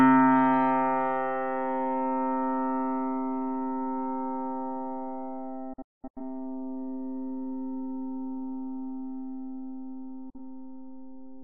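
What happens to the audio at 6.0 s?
A digital broadcast dropout runs from 5.73 to 6.21 s. The receiver stopped getting valid frames and muted, so the audio fades out over 8 ms into several holes totalling 341 ms, the longest 213 ms, consistent with about eight lost frames.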